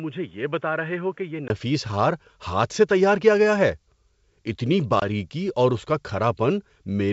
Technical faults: input switched to a poorer device; packet loss on an ADPCM call

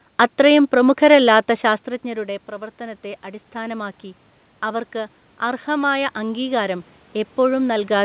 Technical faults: automatic gain rising

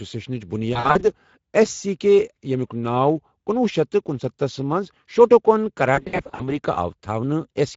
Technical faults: Speex codec; VoIP packet loss concealed by the speech codec

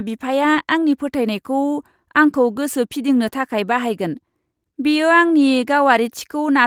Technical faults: short concealed packet loss

